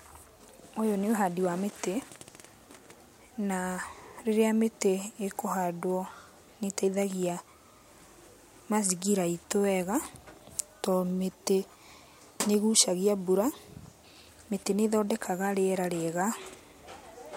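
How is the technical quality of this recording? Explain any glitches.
Listening closely to the recording, nothing stood out as a glitch or technical problem.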